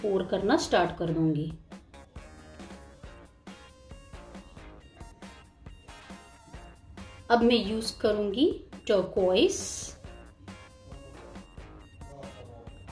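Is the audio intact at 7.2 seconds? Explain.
Yes, the audio at 7.2 seconds is intact, with no dropout, click, distortion or other fault at that moment.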